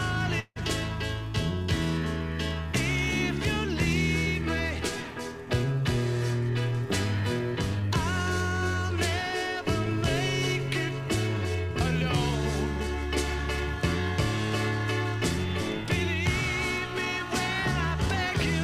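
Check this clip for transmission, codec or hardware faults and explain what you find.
One fault stands out, early in the clip. From 0.39 to 0.59 s the sound smears into a fading buzz for about 160 ms, drops to near silence for roughly 40 ms, then resumes with about 160 ms of material simply gone. This is a long network dropout, likely caused by a run of audio that never reached the receiver, which stretched the last sound it had into a decaying fill before falling quiet and skipping ahead once data returned.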